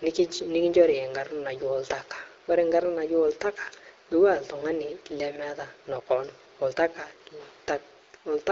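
No technical faults are audible.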